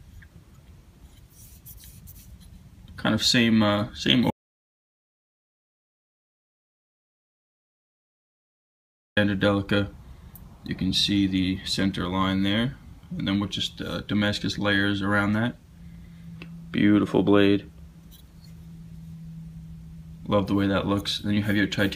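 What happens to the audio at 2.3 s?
Nothing goes wrong at 2.3 s; the audio is intact at that moment.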